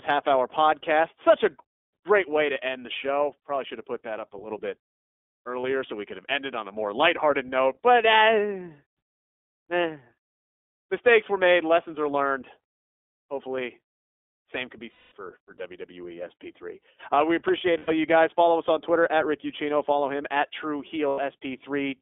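Throughout, the speech carries the iLBC codec. Only the 300 Hz to 3.5 kHz telephone band remains, so it sounds thin and boxy. The damage is plainly audible: a rough, slightly synthetic edge. The rate points to 15.2 kbps with 20 ms frames.

Lost iLBC frames interrupt it four times: 5.60 to 5.65 s (40 ms), 14.92 to 15.12 s (200 ms), 17.78 to 17.90 s (100 ms), and 21.08 to 21.20 s (100 ms). Each time, the decoder repeats the last pitch cycle with noise added. This gives a brief held, buzzy vowel. The 200 ms gap fades as it goes. Each frame decodes on its own, so the sound recovers almost at once.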